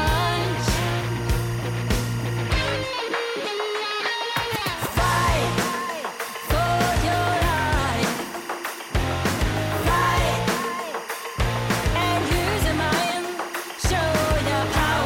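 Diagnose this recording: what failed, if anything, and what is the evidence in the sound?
Timecode bleed runs throughout, from the first second to the last. A steady chirping warble sits roughly 15 dB below the sound, flipping between tones around 1 kHz and 2 kHz. This points to analogue wiring, where linear timecode at 24 frames per second leaks from an adjacent cable or track.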